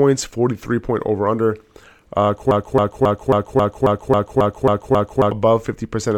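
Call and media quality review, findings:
Broken-record loop, 2.51–5.31 s: one 0.27 s speech fragment repeats exactly, back to back, 10 times, with a stuttering, mechanical cadence. Likely cause: a player, encoder or stream stall that kept resending the last buffered fragment. Audio for that span is lost, not delayed.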